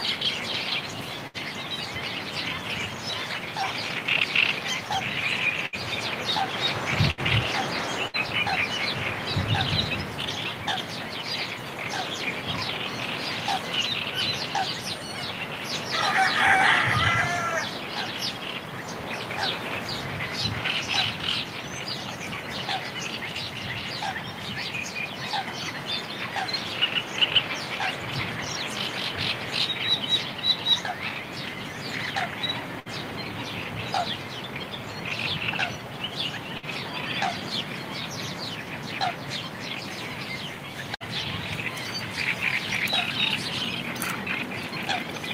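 Bursts of packet loss occur at 1.27, 5.66, 7.11, 8.08, 32.80, 36.57 and 40.95 s. Each time, about 60 ms of sound goes missing. The last sound is stretched and faded over roughly 55 to 70 ms, then playback jumps ahead.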